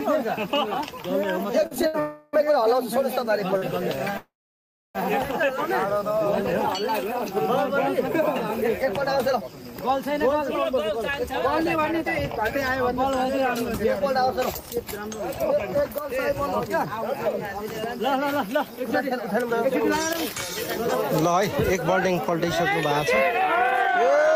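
Between 1.63 and 2.37 s the audio shows repeated stalls (stutter): six brief gaps where packets reached the receiver later than they were needed. Each gap was bridged by continuing the preceding sound, the longest for 70 ms and 145 ms in total, so about a fifth of that stretch is filler and the sound drags unevenly. Overlapping it, from 2.00 to 2.35 s, is a call audio freeze. The last sound is held on as a fading tail for 334 ms without dropping to silence, likely because packets were held up in transit and the jitter buffer ran dry. Playback then resumes where it stopped. A short stall from a late packet follows at 3.57 to 3.64 s, where one sound is stretched by 42 ms until the overdue packet arrives, leaving a slightly held moment. A second call audio freeze runs from 4.18 to 4.97 s, filling 770 ms, of which 650 ms decays to silence before the audio picks up again from the same point. 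From 5.87 to 6.26 s a jitter buffer slow-down repeats small pitch periods to add 51 ms, playing at 89% speed with unchanged pitch and drawn-out sound. From 8.66 s to the end, a jitter buffer speed-up trims short pitch-period pieces continuously, running at 103% speed and removing roughly half a second overall.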